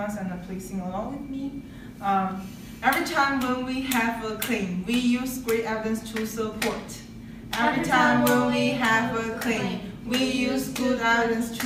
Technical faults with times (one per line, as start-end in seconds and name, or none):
none